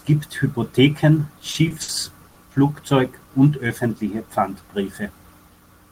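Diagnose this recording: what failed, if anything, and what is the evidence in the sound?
Network: repeated stalls (stutter), 1.39 to 1.90 s. Four held gaps, 110 ms in total, longest 60 ms. Late packets kept emptying the jitter buffer.

Network: short stall from a late packet, 2.28 to 2.38 s. One sound is held for 80 ms. The receiver stretched it, then resumed without loss.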